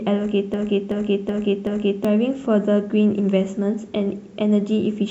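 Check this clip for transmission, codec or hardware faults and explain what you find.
One fault is present, a broken-record loop. From 0.54 to 2.05 s, playback likely stalled and the system kept resending the last fragment it held, a 0.38 s piece of speech. That fragment repeats four times back to back, identically, and the speech that belonged in that stretch never plays.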